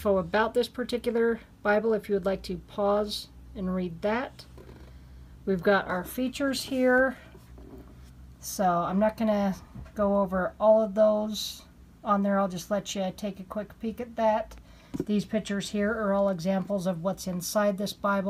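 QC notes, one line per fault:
No technical faults can be heard anywhere in the audio, and the signal holds its continuity throughout.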